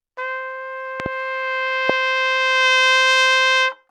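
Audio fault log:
1.00–1.08 s and 1.90–1.92 s, loud pop: a quick double pop about 10 dB above the sound, then a single louder one about 15 dB above it. Each is likely a sudden voltage pulse from a plug, switch or static. Unlike a dropout, the sound carries on unbroken underneath.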